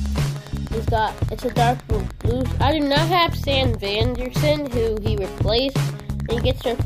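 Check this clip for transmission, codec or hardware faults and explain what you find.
Wi-Fi interference runs through the whole clip as a steady ticking about ten times a second, some 25 dB below the sound. A nearby Wi-Fi radio's beacon, repeating every 102.4 ms, is being picked up and rectified by the audio circuitry.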